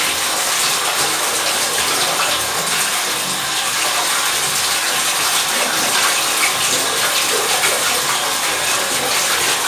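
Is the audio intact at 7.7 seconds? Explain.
Yes, at 7.7 seconds the sound is intact, with no dropout, click, distortion or other fault present at that moment.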